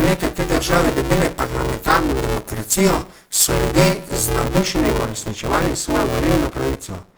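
This speech clip has a grainy, rough texture throughout, with the upper harmonics dissolving into hiss while the band stays full. That points to Opus compression, likely in its music (CELT) mode at a rate around 24 kbps, where starved bands are filled with folded or noise content rather than left empty. A steady robotic buzz at 200 Hz rides on the sound for the whole clip, present only while there is signal. This is buffer tearing: writer and reader cross inside every 5 ms period, so roughly half of each buffer replays audio about 10 ms old, with hard joins on each side. From 0.00 to 4.45 s the sound is thin, bright and hissy on sibilants. That is pre-emphasis left on, an FM 75 µs treble boost of about 14 dB at 10 kHz relative to 1 kHz that was never cancelled by the matching de-emphasis.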